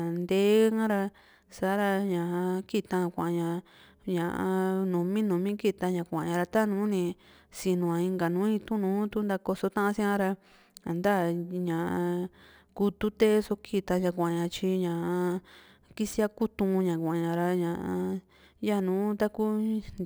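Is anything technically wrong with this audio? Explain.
Yes, there's crude rate conversion running through the whole clip. The speech sounds as if its samples were simply repeated to reach a higher rate, with no filtering, which fits a jump from 32 kHz to 44.1 kHz. That repeating pattern adds an inharmonic, gritty fizz roughly 30 dB under the speech, and it tracks the louder, brighter syllables.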